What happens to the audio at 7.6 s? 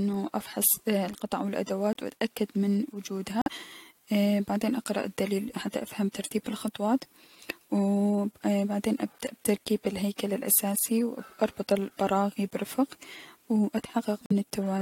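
Nothing goes wrong at 7.6 s: the speech carries on intact through that moment, with no dropout, click, distortion or other fault.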